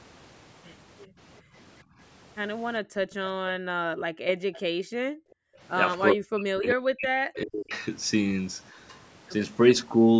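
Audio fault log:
1.42–1.54 s, 1.84–1.98 s, 2.82–3.2 s, 4.69–5.6 s: background gated by the echo canceller. The room sound ducks while the far end plays, about 16–18 dB on the short early dips and as deep as about 40 dB later, then comes back.
3.79–4.26 s, 6.14–7.73 s: speech suppressed in double talk. The talker gets pushed down hard, roughly 40 dB, likely because the canceller couldn't tell them apart from the loudspeaker while both sides spoke.
4.54–4.59 s: echo leak. A faint scrap of the voice comes back about 400 ms late at around 30 dB under the speech, likely residual loudspeaker echo the canceller missed.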